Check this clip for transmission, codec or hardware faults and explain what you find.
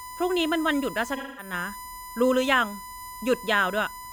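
Two faults are audible in this speech recording: a steady whine throughout and one concealed dropout.

USB whine: a fixed 1 kHz tone sits about 15 dB below the speech for the whole clip, from USB frame-rate current leaking into power or ground.

AAC frame loss with concealment: from 1.16 to 1.53 s the speech turns smeared and noisy as the decoder patches lost frames from earlier spectrum, consistent with roughly five frames missing.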